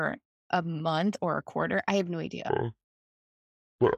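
At 2.49 s, right after "quarter I have no", the playback clock likely stops matching the rate the recording was made at, so the last stretch of the clip runs at about 0.56 times its proper speed: a section at the wrong speed. Because speed and pitch move together, the speech drops by roughly ten semitones and drags, turning deep and slow from that moment through to the end.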